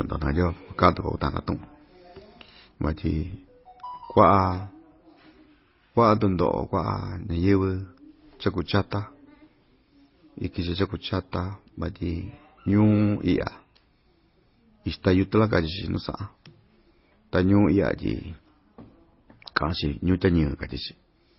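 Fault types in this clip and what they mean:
Transcoding between lossy codecs: throughout, the speech carries two kinds of coding damage at once, smeared, watery detail under a hard ceiling at 5.7 kHz. This fits a low-rate MP3 pass near 24 kbit/s likely re-encoded to Opus near 32 kbit/s, keeping the lower cut-off.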